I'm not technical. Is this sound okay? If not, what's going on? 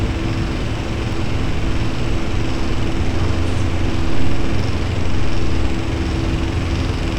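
No. At about 1.13 s there's a low thump, and another at about 4.6 s, while the sound carries on unchanged. This is a DC step: the waveform's resting level suddenly shifts off centre, holds there, then snaps back, and each jump is heard as a thump.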